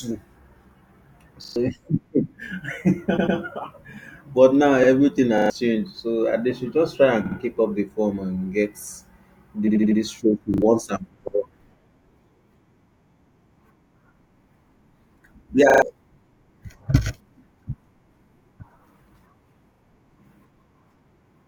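A short stutter at 1.44 to 1.56 s is a repeated buffer: fresh audio missed its deadline, so the output replayed the same 40 ms block three extra times, with a hard join at each repeat and roughly a tenth of a second of real sound never heard. The same stutter returns at 5.38 s, 10.54 s (just before "and for all", two extra plays), 15.7 s and 19.74 s (two extra plays).

Other stutters come from repeated frames, where a run of compressed frames was delivered more than once and decoded again, lengthening the audio. At 3.17 to 3.37 s a 100 ms block plays twice more, adding 200 ms. After "but now" at 4.83 s a 60 ms block repeats once. Between "should just try and" and "keep up the form" at 7.25 s, 60 ms sounds twice more. At 9.67 to 9.99 s an 80 ms block repeats four times, adding 320 ms, and at 11.27 s 80 ms repeats once.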